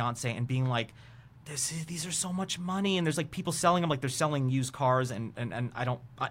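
Nothing stood out on listening to this speech recording.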